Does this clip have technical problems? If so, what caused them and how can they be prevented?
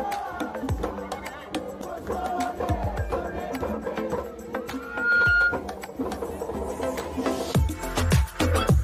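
Yes. Loudspeaker feedback squeal runs from 4.80 to 5.64 s: a single tone near 1.4 kHz swells over roughly a third of a second to about 10 dB above the sound, as the microphone re-amplifies its own loudspeaker. Prevent it by lowering gain, repositioning the microphone, or notching 1.4 kHz.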